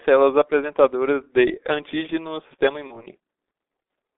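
From start to finish the speech has the G.723.1 codec on it, and it's heavily damaged. Everything sits inside a narrow telephone band, roughly 300 Hz to 3.7 kHz, so it sounds boxed-in and muffled. The codec models the voice in 30 ms chunks and doesn't update that model very often at its low rate, which fits the 6.3 kbit/s mode. The result is a hoarse, grainy quality with consonants smeared together rather than crisp.

Around 2.87 s you get VoIP packet loss concealed by the speech codec, running to about 3.06 s. The gap fits a single lost 30 ms frame. The decoder bridged it by carrying forward its last pitch and filter settings and turning the gain down, so that spot is stretched into a buzzy tone or coloured noise that fades. Because each frame builds on the previous one, the voice stays weak or a bit warped for a while after the loss before it recovers.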